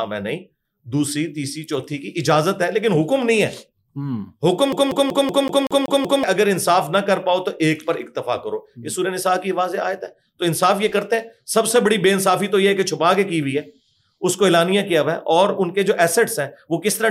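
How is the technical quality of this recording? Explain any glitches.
The recording has one clear glitch, a CD stuck on one turn, from 4.72 to 6.24 s. A scratch keeps knocking the laser back one track at the same point of each revolution, so a 0.19 s slice of sound plays eight times in a row, with a brief mute at every jump. Unlike a streaming dropout or buffer underrun, which leaves gaps or irregular repeats, this stutter is fast, evenly spaced and locked to one fragment.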